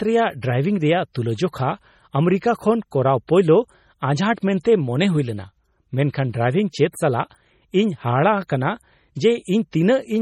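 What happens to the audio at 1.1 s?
Right around 1.13 to 1.15 s, between "ᱨᱮ ᱰᱨᱟᱭᱵᱷᱤᱝ ᱨᱮᱭᱟᱜ" and "ᱛᱩᱞᱟᱹᱡᱚᱠᱷᱟ ᱟᱢᱮᱨᱤᱠᱟ", there's pre-echo. A sharp onset sits late in a codec block, so coding noise spreads back into the quiet just before it. You get a short hiss about 21 ms ahead, and the attack comes out soft and smeared.

That pre-echo sits on top of heavy damage that runs through the whole speech clip and is likely from MP3 compression at a very low bitrate, around 32 kbps. Weak frequency content drops in and out from frame to frame, so the sound comes across watery and swirly, with chirpy, metallic s sounds and blurred attacks.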